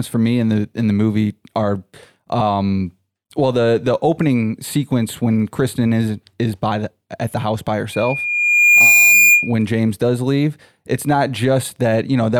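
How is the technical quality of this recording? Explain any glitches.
One fault spoils this speech recording. From 7.92 to 9.53 s, just after "at the house by", a loudspeaker feedback squeal appears. The microphone hears its own loudspeaker, and the loop runs away at 2.4 kHz. The tone swells over about a second and peaks about 5 dB above the speech.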